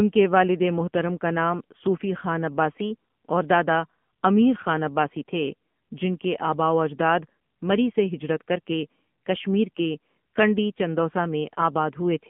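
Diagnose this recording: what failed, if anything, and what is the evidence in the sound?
The codec stage is the culprit here: the speech has gone through the AMR narrowband mobile codec for its whole length. Everything sits in a phone-line band of roughly 150 Hz to 3.4 kHz, with nothing up top, and the voice has that plainly audible buzzy, synthetic edge you get when a vocal-tract model is fed too few pulses per frame. The amount of damage fits one of the lower AMR-NB modes, around 7.4 kbps.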